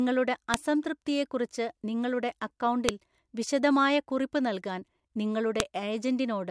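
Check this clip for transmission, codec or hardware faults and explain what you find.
The speech carries one kind of fault, file header played as audio, at 0.54 s (just before "അസംതൃപ്തിയെക്കുറിച്ച് നിങ്ങളുടെ"), 2.89 s (between "അസംതൃപ്തിയെക്കുറിച്ച് നിങ്ങളുടെ" and "വിശദമായ കുറിപ്പ് നൽകാൻ") and 5.60 s. At each piece's start, unstripped header bytes play as samples, giving a sharp snap, a one-millisecond spike in the waveform and a full-height vertical line on the spectrogram.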